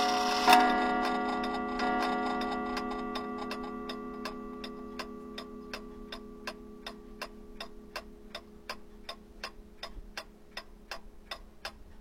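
A recording of sounds in which just under a second of audio plays twice: from 1.77 s to 2.74 s the material repeats, with a small blip at the jump back. This is a stream segment repeated, where the player fetched or queued the same 0.98-second segment a second time.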